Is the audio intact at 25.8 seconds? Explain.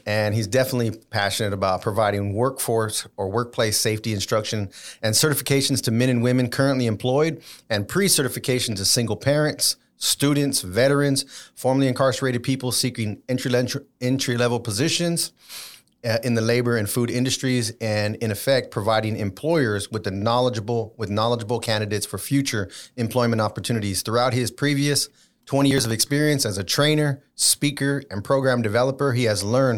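No. From 25.71 to 26.03 s the processor is overloaded and misses several buffer deadlines in a row, each slot of around ten milliseconds skipped outright. The resulting hard-edged gaps pile up into processor overload crackle, a gritty tearing over the speech.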